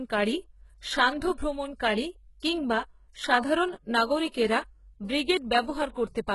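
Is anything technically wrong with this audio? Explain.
Yes. Throughout the speech, the treble sounds synthetic, with nothing above 11.5 kHz. Sibilants turn gritty and metallic. This is likely HE-AAC compression, with the upper band rebuilt from copied lower harmonics that don't line up. The heavy damage fits a very low bitrate, around 12 kbps.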